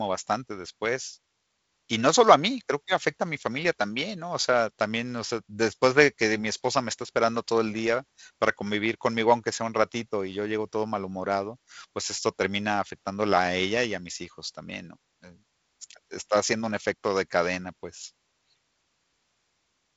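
Nothing in this speech recording stands out as a technical fault. It carries the sound of G.722 wideband telephone coding, with the band stopping near 7.8 kHz and a faint coding roughness that fits the 48 kbit/s mode.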